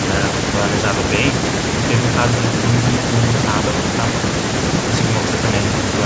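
No technical faults turn up anywhere in this speech recording, so there is nothing to place in time order.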